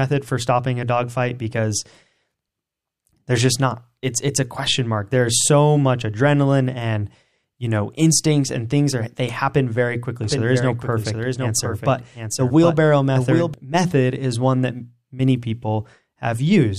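A second capture path, likely a slower route that records the same signal again, feeds a delayed duplicate into the mix from 10.24 s to 13.54 s, producing a doubled audio track. A full-band copy of the speech trails the original by roughly 0.7 s at around 5 dB lower, with no decay or room colour, so syllables repeat as a distinct, clean echo. The copy switches in and out abruptly at both ends.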